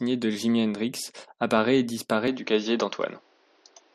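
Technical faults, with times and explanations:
2.28–3.95 s, input switched to a poorer device: after "apparaît et", sound dulls abruptly, cut above 6.6 kHz, with faint new hiss. Likely a narrower-band microphone.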